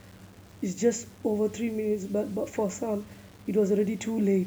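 A short speech recording with coarse, grainy distortion running through the whole clip, the signature of low bit depth without dither. The grit rides on the speech itself, thickening on quiet passages and tails, where low-level detail collapses into a stepped, sputtering texture, with an error floor roughly 30 dB below the signal. The likely cause is samples being rounded to around 7 bits with no dither to decorrelate the error.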